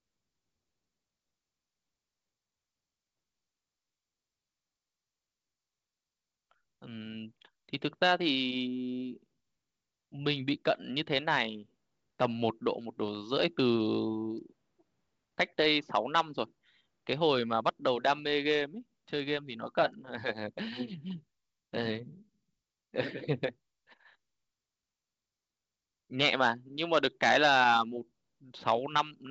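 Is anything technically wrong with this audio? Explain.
No, nothing is technically wrong with this audio.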